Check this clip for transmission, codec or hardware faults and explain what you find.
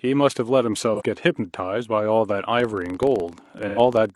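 Two kinds of fault are present in the speech: AAC frame loss with concealment, occurring twice, and a filter restarted on every block that runs through the second half of the clip.

AAC frame loss with concealment appears first at 0.95 to 1.02 s, a gap of about 43 ms, and again at 3.68 to 3.79 s, about 85 ms. When a compressed frame fails to arrive, the decoder synthesises a stand-in from the last good spectrum. It reuses the magnitudes but not the true phase or detail. The first dropout sounds like one frame's worth. Its brief patch is smeared or noisy. The second is about twice as long, which points to two consecutive frames. Its filled-in stretch is smeared, noisy or phasey before the real signal resumes.

The filter restarted on every block begins at 2.43 s and continues to the end. The filter discards its internal history at each block boundary and starts from zero, so every block opens with a small transient. 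These transients repeat at 23.4 Hz, which fits a 1024-sample block. The result is a low buzz or rapid ticking under the speech that rises and falls with its level and overlaps the second dropout.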